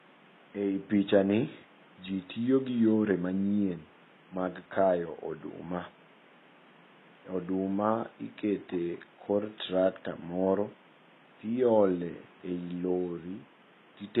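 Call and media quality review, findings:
Likely HE-AAC compression throughout, at a very low bitrate (fits roughly 16 kbps). Treble rebuilt by band replication, so s sounds turn gritty and lispy, with misaligned upper harmonics. Room noise sits about 29 dB below speech.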